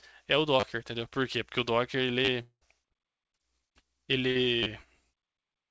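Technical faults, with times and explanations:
0.60 s, 2.25 s and 4.63 s, repeated buffer: each time new audio arrived late, so one 10 ms piece of speech played three extra times, dropping about 30 ms. The result is a brief buzzy stutter. On the waveform you see four identical 10 ms cycles with hard joins, and on the spectrogram a short band of harmonics 100 Hz apart.
2.42–2.63 s, long network dropout (likely cause): about 0.2 s of speech never arrived. The receiver stretched the last sound into a buzz that fades into silence, and then speech resumes with that part missing. On the spectrogram the last harmonics smear flat and fade to an empty gap, and the waveform's envelope decays toward zero.
4.31–4.37 s, short concealed packet loss: 40 ms of audio was lost and synthesised from the preceding sound, then blended back in. It is heard as a quick smear or wobble. On the spectrogram that patch looks blurred, and the waveform shows a soft crossfade back into the real audio.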